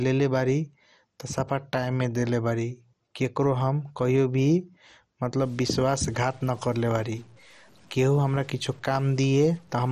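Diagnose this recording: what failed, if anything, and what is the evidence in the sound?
The whole clip sounds dull, with a gurgling, granular distortion on the speech. Nothing remains above 13.8 kHz. Upper sub-bands are switched off, and the bands left are coarsely quantised. The codec stage is likely at fault: heavy MP2 compression, fitting a low rate near 56 kbps.

From 5.40 s to the end, a distortion rides on the speech, and the pauses fill with noise. The converter or its data lines likely have a stuck bit. One bit is held fixed, so about half the samples are off by that bit's weight.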